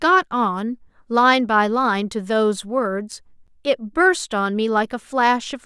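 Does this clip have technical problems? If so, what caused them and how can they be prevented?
Yes. A block of digital silence at 3.47 s cuts the speech out for about 11 ms, fitting a 256-sample buffer left unfilled. Prevent it by enlarging the buffer or giving the audio thread priority so processing finishes before each deadline.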